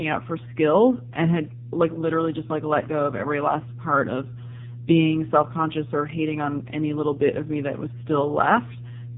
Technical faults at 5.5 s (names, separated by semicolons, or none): mains hum; AMR narrowband mobile codec